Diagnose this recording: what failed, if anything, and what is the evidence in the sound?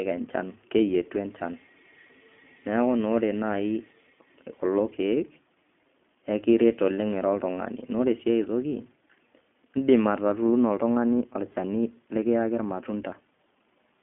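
The speech sounds thin and boxed in from start to finish, with a rough, slightly synthetic grain and nothing above 3.8 kHz. The fault is at the codec stage. An iLBC codec codes each 20 ms frame on its own over a 200 Hz to 3.4 kHz line, which fits its 15.2 kbps mode.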